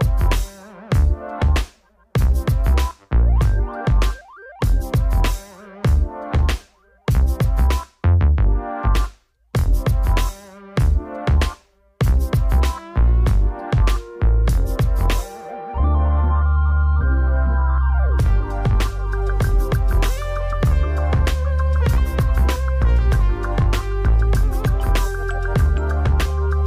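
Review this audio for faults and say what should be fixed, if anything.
No faults turned up in this audio, so nothing needs to be fixed.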